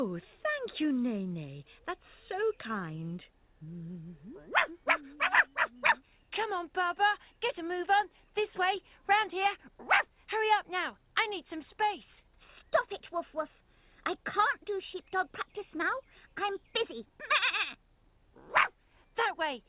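No technical faults are audible.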